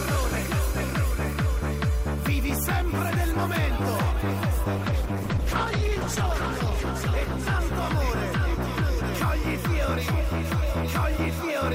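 At 4.78 s the sound turns coarse. This is a call bitrate drop. The connection's bandwidth estimate fell, so the encoder had to squeeze the signal into far fewer bits. The audio loses its top end and sounds muffled and rough or watery. The degradation points to a fall from roughly 128 kbps to about 11 kbps. The worst stretch lasts about 1.56 s. Quality climbs back, and clarity returns by 10.91 s.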